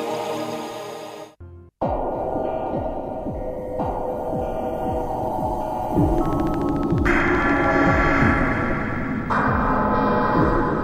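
A train of clicks runs from 6.18 to 7.65 s: about twenty near-identical pulses at a regular 13.7 per second, peaking about 5 dB above the sound. The likely cause is interference from nearby equipment or a faulty connection or power supply, and it is heard as steady ticking.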